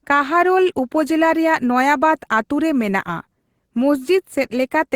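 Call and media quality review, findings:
No faults found on this speech clip, nothing audible to flag or trace to any component.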